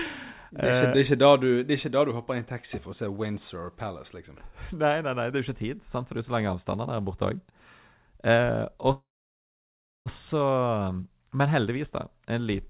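At 8.92 s the speech stalls into a short fading buzz, then about 1 s of silence, resuming at 10.08 s exactly where it stopped, nothing skipped. This is a call audio freeze, likely from delayed packets draining the jitter buffer. Unlike a dropout, it inserts a gap rather than losing speech. The narrowband G.711 line, with nothing above 4 kHz, stays constant throughout.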